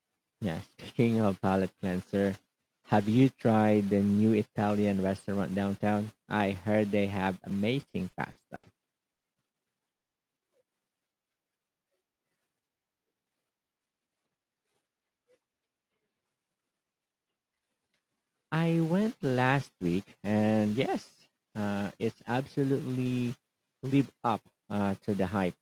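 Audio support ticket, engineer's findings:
Repeated stalls (stutter), 7.81–8.65 s, right after "I heard they have": packets arriving late or too slowly, jitter buffer running dry five times. Receiver stretched the last sound to fill 180 ms, longest wait 80 ms, about a fifth of the span. Nothing lost, but the speech drags and stutters.

Call audio freeze at 9.13 s (110 ms) and 9.96 s (190 ms): likely packets held up in transit and the jitter buffer emptying. Sound drops to silence for the full gap, then resumes where it stopped. Each gap adds its full length to the delay. Nothing is skipped.

Jitter buffer slow-down, 11.08–11.27 s: buffer low or target delay raised. Receiver repeated single pitch periods to rebuild reserve, adding 35 ms. Speech plays at 86% speed at unchanged pitch, sounds drawn out.

Jitter buffer speed-up, 13.14–14.67 s: buffer overfilled. Receiver trimmed short pitch-period chunks repeatedly, roughly 200 ms in all. 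Speech runs at 112% speed, same pitch, audibly hurried.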